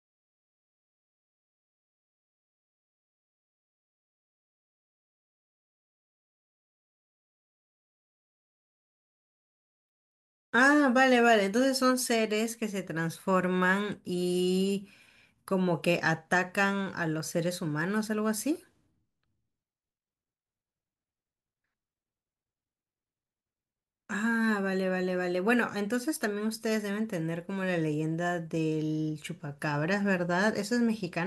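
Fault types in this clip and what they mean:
No technical faults can be heard in the speech; the signal holds steady, with no dropouts, distortion, level jumps or timing disturbances anywhere in it.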